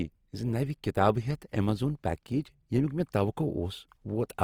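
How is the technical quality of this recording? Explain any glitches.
The recording carries plainly audible codec damage for its whole length. Throughout, the speech sounds grainy and rough, likely from Opus compression in its music mode at a low bitrate, which fits about 24 kbps. The codec preserves each band's energy but fills starved bands with folded or noise content, so the full bandwidth survives while detail turns noisy. That graininess, with less MP3-style swirling and few holes, sets it apart.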